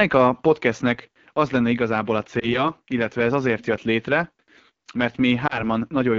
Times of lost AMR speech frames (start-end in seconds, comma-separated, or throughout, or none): 2.39-2.69, 5.47-5.64